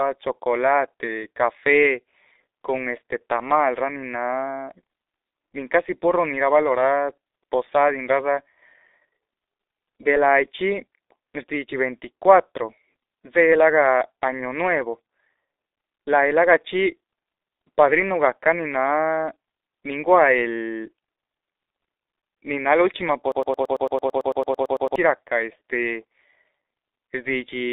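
From start to finish the speech carries G.723.1 codec damage, heavy enough to sound muffled and hoarse, with consonants smeared into each other. The low rate fits the codec's 6.3 kbit/s mode, where a slowly updated voice model is rebuilt every 30 ms. On a spectrogram the energy sits in a telephone band of roughly 300 Hz to 3.7 kHz, with nothing at all above 3.8 kHz, so everything above that line is empty.

At 23.32 s a broken-record loop begins and runs to 24.96 s. A fragment of about 0.11 s repeats exactly, back to back, 15 times, producing a rapid stutter, and the speech that should have filled that stretch never arrives. The likely cause is a stall in the player or stream that kept resending its last buffered piece. The waveform shows an identical short shape tiled across the span, and the spectrogram shows evenly spaced vertical repeats.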